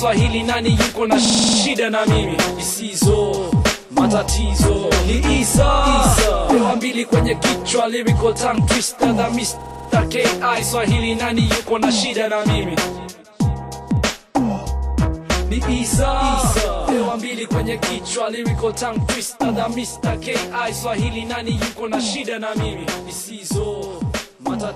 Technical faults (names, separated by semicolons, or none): system hang loop